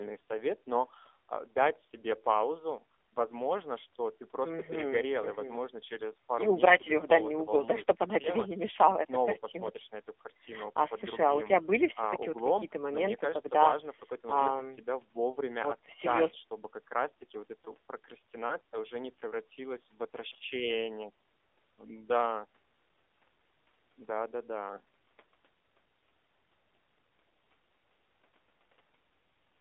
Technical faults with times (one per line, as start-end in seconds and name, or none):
0.00-29.60 AMR narrowband mobile codec